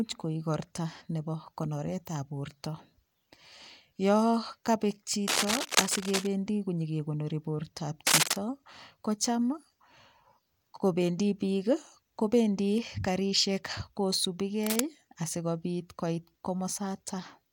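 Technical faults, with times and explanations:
5.28–6.27 s, 8.07–8.36 s and 14.63–14.80 s, cable scratch noise: dense, ragged bursts of crackle and rustle sit over the speech, the first starting just after "yo kabek". The first and last are about as loud as the speech, and the middle one is about 5 dB louder. A worn cable or connector being moved is the likely cause: its contact resistance flickers rapidly, so the signal picks up irregular noise for as long as the movement lasts.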